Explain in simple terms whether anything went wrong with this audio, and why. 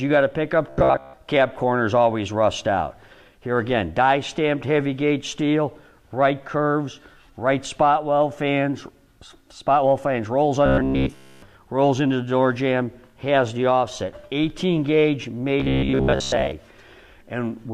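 Robotic sound from repeated short buffers appears at 0.67–1.14 s, 10.66–11.42 s and 15.60–16.52 s: a stiff, metallic buzz near 66.7 Hz. Likely, audio arrived too slowly and a 15 ms chunk was replayed in its place, covering most of the sound, and in the middle stretch all of it.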